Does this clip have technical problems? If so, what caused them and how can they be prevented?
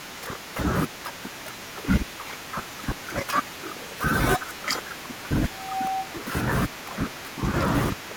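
Yes. From 5.50 to 6.14 s a pure tone near 764 Hz swells over roughly a third of a second into a squeal about as loud as the speech itself. This is loudspeaker feedback squeal: the microphone was picking up a loudspeaker it was feeding, and at 764 Hz the round-trip gain exceeded one, so that frequency fed on itself and grew. Lowering monitor gain, moving the microphone away from or behind the loudspeaker, or notching 764 Hz would prevent it.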